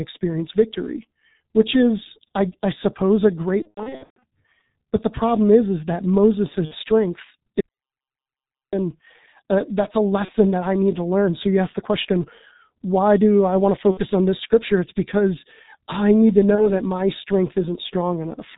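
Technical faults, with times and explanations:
throughout: G.723.1 codec at about 6.3 kbit/s, heavily degraded. Nothing above 4 kHz passes, and the slowly updated voice model leaves speech muffled and hoarse with smeared consonants.
3.62–4.23 s after "I I suppose a", 6.65–6.75 s, 10.25–10.31 s between "uh that's a" and "that I need to", 13.91–14.01 s between "do I want to" and "on this scripture", 16.55–16.72 s: VoIP packet loss concealed by the speech codec. The decoder stretches its last pitch and filter into a buzzy tone or coloured noise that fades. The first stretch holds 390 ms of gaps scattered over 600 ms, with runs up to 120 ms. The others lose 30–60 ms, consistent with single 30 ms frames or pairs.
7.61–8.73 s: audio dropout to silence. Speech cuts out mid-flow for 1.12 s of silence with no room tone, likely because the input was lost while recording continued writing silence.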